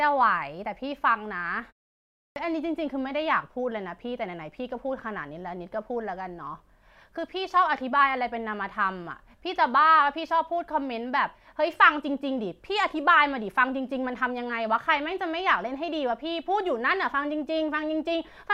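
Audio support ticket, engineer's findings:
Clipped start after a pause: output device slept during 0.65 s silence, needed time to wake. First 71 ms of speech swallowed at 2.29 s; onset abrupt.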